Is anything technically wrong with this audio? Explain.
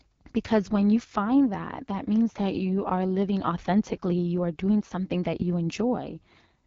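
Yes. Throughout the speech there is a rough, raspy quality, and nothing is heard above about 7.2 kHz, consistent with the AMR wideband (HD Voice) codec at a low rate. The codec models the voice with a pulse-excited vocal tract filter up to 6.4 kHz and substitutes shaped noise from there to 7 kHz. With so few bits, the pulse excitation is coarse, producing the grainy texture. The plainly audible damage fits the 8.85 kbit/s mode, one of AMR-WB's two lowest rates.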